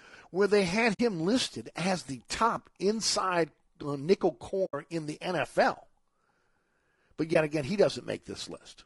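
This is a speech clip. Throughout, the voice sounds rough and grainy, with noise filling the gaps between harmonics. The damage is plainly audible. It is likely low-delay AAC compression, AAC-ELD of the video-call kind, at a rate that fits about 32 kbps. There is also AAC frame loss with muting. The decoder zeroed the missing frames, so the sound fades out and back in. The first hole falls at 0.93 to 1.00 s, after "where they had", and lasts about 60 ms. The second falls at 4.65 to 4.74 s, after "top inside uh nickel", and lasts about 80 ms. The third is a brief dip of about 20 ms at 7.33 to 7.36 s, just before "again he". Their lengths fit three, four and one lost frames.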